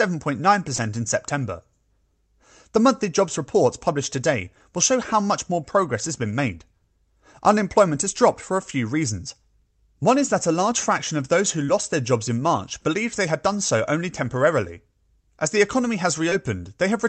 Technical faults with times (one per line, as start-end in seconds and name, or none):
0.75-0.91 short concealed packet loss
11.66-11.70 short concealed packet loss
16.30-16.33 short concealed packet loss